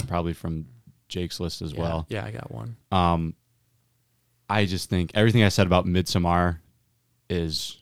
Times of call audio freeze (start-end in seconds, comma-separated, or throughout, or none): none